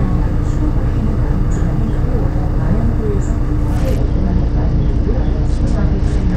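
At 3.77 s a Bluetooth SBC bit pool drop sets in and lasts to the end: the link appears to have cut the encoder's bit allocation sharply, which fits a fall from a bit pool near 28 to about 10, roughly 84 kbps. Starved upper sub-bands leave the treble dull, while coarse quantisation adds gritty noise.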